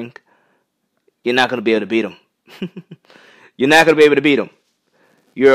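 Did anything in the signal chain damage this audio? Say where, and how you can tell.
No, nothing in the signal chain shows audible damage to this speech recording at any stage.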